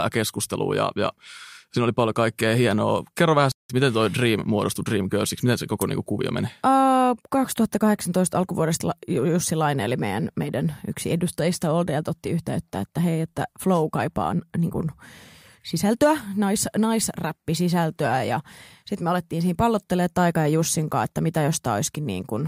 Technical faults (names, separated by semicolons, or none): playback stall